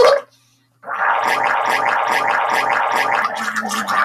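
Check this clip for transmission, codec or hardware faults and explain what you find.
There's one clear fault here: a broken-record loop from 1.54 s to 3.22 s. A 420 ms fragment plays four times back to back, identical on every pass, so the sound gets stuck in a stuttering repeat before carrying on. The likely cause is the player, encoder or stream stalling and re-sending the last chunk it held. Whatever audio should have filled that stretch is simply lost.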